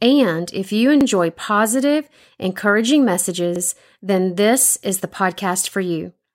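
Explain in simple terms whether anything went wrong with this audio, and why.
Something did go wrong: the speech has overlapping chunks. The audio was handled in pieces about 2.5 s long, and each piece began slightly before the previous one finished, so 50 ms of sound plays twice at the join. That produces a brief stutter at 1.01 s, right after "and if you", and again at 3.56 s, before "then this is the". Unlike a dropout, nothing goes missing; a sliver repeats instead, at a steady 2.55 s spacing.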